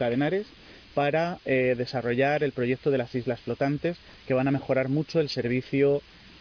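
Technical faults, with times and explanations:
Throughout: aliasing. The audio was brought down to what sounds like an 11 kHz rate with no filter first, so anything above 5.5 kHz folds back as unrelated tones, roughly 25 dB down, giving a gritty, metallic edge that runs right up to the band limit.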